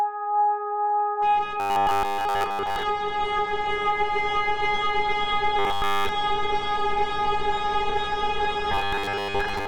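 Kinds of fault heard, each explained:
Robotic sound from repeated short buffers: the sound turns into a rigid 100 Hz buzz, likely from a 10 ms chunk looping while fresh audio gets skipped.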